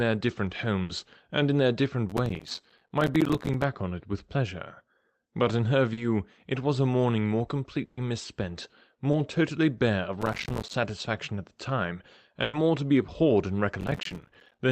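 At 0.83 to 0.91 s there is a burst of packet loss. About 60 ms of speech never arrived. The receiver stretched the last sound and faded it, so a held buzz or hiss replaces the missing part. From 2.10 to 3.64 s comes processor overload crackle. Many short audio buffers, which fits buffers of around 5 ms, missed their deadlines. Each left a tiny silent hole with hard edges. Together they make a gritty tearing over the speech. At 5.93 to 5.99 s, a short concealed packet loss fills about 40 ms with continued sound. It blends back in as a brief smear. Another burst of packet loss hits 7.85 to 7.99 s, with about 120 ms gone and a longer fading fill. A second short concealed loss at 9.11 to 9.15 s covers about 20 ms, heard as a brief smear. Crackle returns from 10.21 to 10.74 s. A third burst of packet loss runs 12.43 to 12.55 s, about 100 ms missing. Crackle returns once more from 13.81 to 14.59 s. 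Throughout, the call codec keeps the sound band-limited to about 8 kHz.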